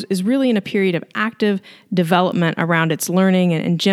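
At 0.94 s and again at 2.32 s there's a bit error spike, a single flipped bit that makes the waveform jump by a power of two and snap straight back. Each is one sharp, broadband tick, peaking around -27 dBFS and then around -21 dBFS. The first sounds like a few consecutive samples were hit, the second just one.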